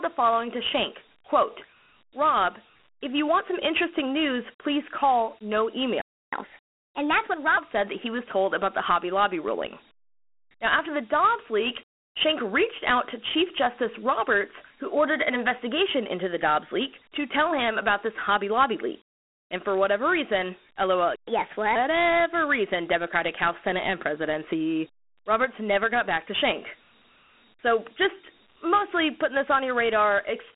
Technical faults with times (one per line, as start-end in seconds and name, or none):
0.00-30.55 Dialogic VOX ADPCM
6.01-6.33 playback stall
6.33-7.57 catch-up at higher speed
21.16-21.27 playback stall
21.27-21.75 catch-up at higher speed